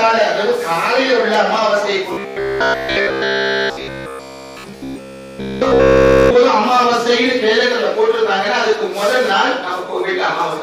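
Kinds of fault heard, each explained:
Robotic sound from repeated short buffers: a rigid metallic buzz pitched at 66.8 Hz from 2.13 to 6.36 s, likely a 15 ms chunk looping; unlike dropouts, nothing goes silent.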